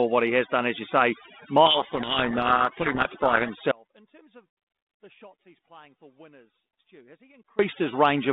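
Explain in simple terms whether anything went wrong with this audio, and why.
Overdone noise removal runs through the whole recording: the cleanup was set too hard, so the background sits near silent with little twinkling specks.

Right after "done as you say", from about 1.66 to 3.51 s, there's a codec payload misread. The two ends disagreed on the bit order of the phone codec's code words, so the speech gets buried under harsh, grinding distortion.

Then from 3.72 to 7.59 s there's an audio dropout to a faint residue. The sound cuts out abruptly for nearly four seconds, leaving only a faint trace far below normal level, likely because the signal was lost while the line stayed open.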